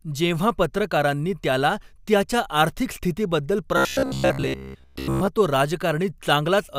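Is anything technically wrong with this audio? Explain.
Yes. From 3.77 to 5.27 s, after "त्याला त्याच्या आर्थिक स्थितीबद्दल", robotic sound from repeated short buffers: most of the speech becomes a rigid metallic 66.8 Hz buzz, likely from a roughly 15 ms buffer repeated during starved playback.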